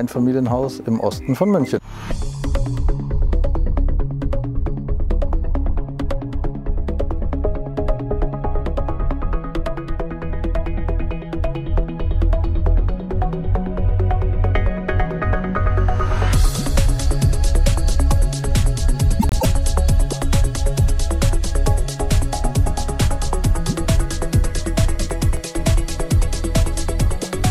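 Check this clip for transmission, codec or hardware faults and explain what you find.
Two faults can be heard: a scrambled stretch near 19 s and a short burst of ticks near 25 s.

From 19.19 to 19.45 s the frames are out of order. Two neighbouring blocks of about 105 ms each, a length that fits runs of four codec frames, were decoded in swapped order, so the second half plays before the first. The result is a brief garbled flutter, and no time is lost. On a spectrogram the spectral patterns jump at each join. The waveform shows discontinuities there.

From 24.83 to 25.90 s there are CD scratch ticks: five of them, at about four to five per second, which matches one per disc revolution. At each tick the damage exceeded what error correction could rebuild, so the player interpolated or muted the samples, leaving clicks of uneven strength, the longest around a millisecond. The waveform shows tiny notches or spikes. 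On a spectrogram each tick is a thin vertical broadband line.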